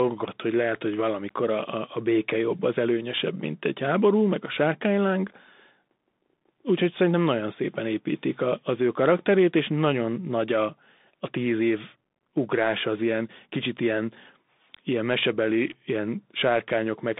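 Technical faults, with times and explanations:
Throughout, Bluetooth CVSD headset codec: the sound is cut to about 200 Hz to 3.7 kHz with nothing above 3.8 kHz, and a one-bit up-down coder, fitting 64 kbps, leaves granular hiss, scratchy s sounds and slope-overload distortion. That grit distinguishes it from a clean telephone band-limit.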